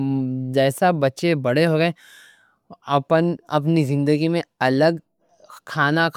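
Nothing in this speech recording stands out as a technical problem; there's no dropout, glitch or distortion anywhere to point to.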